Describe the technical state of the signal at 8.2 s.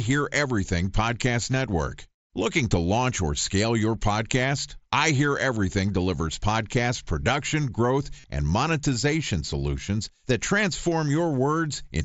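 There's concealed Bluetooth headset packet loss at 8.2 to 8.24 s. The receiver patches the gap by repeating recent waveform, giving a brief buzzy hold and slight warble on recovery.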